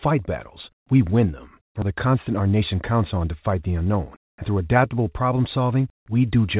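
Right after "battles we win them", at 1.82 to 1.84 s, the audio shows a skip ahead: roughly 0.4 s of speech is simply gone and the two sides are butted together with no silence or fill. Unlike a dropout, nothing goes quiet; the speech just lurches forward mid-flow.

From 1.91 to 2.92 s, ending just before "on to fight the", a jitter buffer speed-up plays the speech at about 110% rate, and again from 3.78 to 4.76 s, just after "on to fight the", at about 109%. Each time the receiver trims small pitch-period slices, around a tenth of a second in total, to shrink a backlog of buffered audio. The talking sounds hurried but keeps its pitch, which separates it from a resampling or pitch-shift error. Throughout, the G.711 mu-law call path leaves nothing above 4 kHz.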